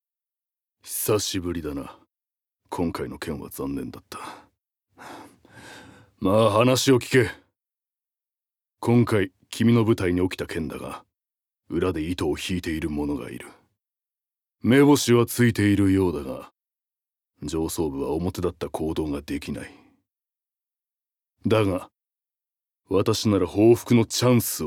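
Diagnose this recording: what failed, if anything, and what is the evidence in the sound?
Nothing failed in this recording, and the sound offers no evidence of any fault.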